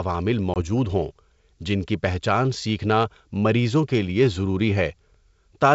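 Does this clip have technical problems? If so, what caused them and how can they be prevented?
Yes. Packet loss on the 64 kbit/s G.722 ADPCM call dropped one packet at 0.54–0.57 s, a 20 ms silent gap that desynchronises the decoder's predictor and step size, so speech resumes slightly distorted. Packet loss concealment that keeps decoder state aligned, plus redundancy or retransmission on the link, would prevent it.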